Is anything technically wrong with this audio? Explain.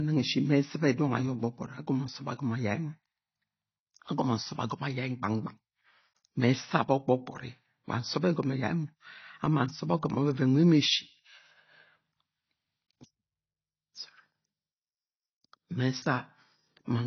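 Yes. Throughout the speech, the band stops dead at 6 kHz, with a dull, smeared, warbling texture, likely AAC compression at a low bitrate near 24 kbps; spectrograms show a flat ceiling.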